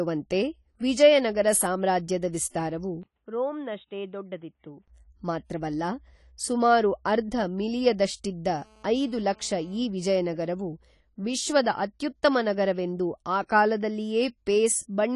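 Speech, with a dull, smeared quality throughout and nothing above 11.5 kHz. That points to AAC compression, likely AAC-LC at around 32 kbps. The codec damage is plainly audible. The encoder drops the top band and quantises the rest coarsely to save bits. From 3.03 to 4.88 s, right after "ವಿಜಯ ನಗರ ಸಾಮ್ರಾಜ್ಯದ ವಿಸ್ತಾರವು", the sound turns boxy. Nothing above 3.8 kHz remains. The level drops by roughly 10 dB, and a new noise floor sits about 50 dB under the speech. A 20 ms gap at 3.03 s marks the change. This is likely an input switched to a poorer device. From 8.46 to 9.80 s, between "ಸುಮಾರು ಅರ್ಧ ಮಿಲಿಯದಷ್ಟಿದ್ದ" and "ಈ ವಿಜಯನಗರವು ವಿಶ್ವದ ಅತ್ಯುತ್ತಮ", a GSM phone buzz appears. It is a raspy 217 Hz buzz with harmonics, about 32 dB below the speech. It comes from a nearby phone on a call, whose radio bursts the audio circuit rectifies.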